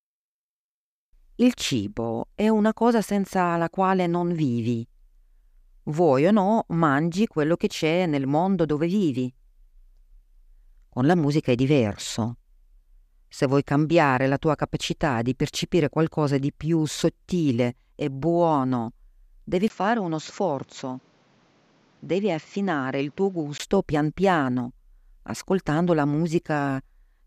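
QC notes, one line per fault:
19.68–23.60 s, input switched to a poorer device: after "sottile e buono devi" the speech drops about 5 dB and loses everything above 7.6 kHz, turning duller and boxier, with a 20 ms gap at the changeover and a new noise floor roughly 35 dB under the speech. The full band and the original level return before "pian piano ascoltando la". This likely comes from the system switching to a narrower-band microphone mid-recording and then switching back.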